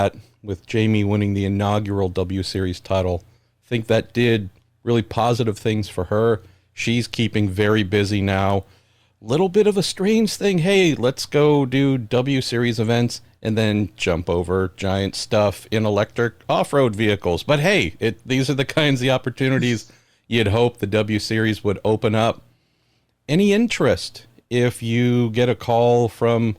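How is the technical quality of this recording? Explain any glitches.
Nothing here needs explaining, since I can't hear a single technical glitch anywhere in the recording.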